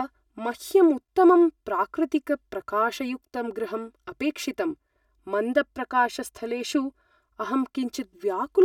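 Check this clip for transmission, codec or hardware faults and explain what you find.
One fault here, running the whole way through: channel delay, heard as comb filtering. One side lags the other by roughly 3 ms, and folding them to mono cancels the shared speech at evenly spaced frequencies, starting around 150 Hz. The result is a hollow, phasey voice.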